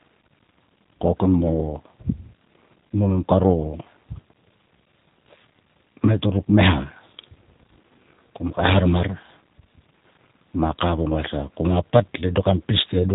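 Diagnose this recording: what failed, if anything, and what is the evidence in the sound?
Throughout, the speech sounds thin, slightly rough and synthetic, with nothing above 3.8 kHz. This is plainly audible G.729 codec damage at the codec stage: speech is rebuilt from a filter, a pitch predictor and sparse pulses, which fits 8 kbit/s G.729A.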